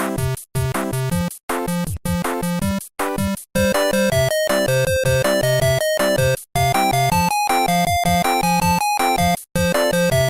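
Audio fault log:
Nothing stood out on a careful listen to this audio.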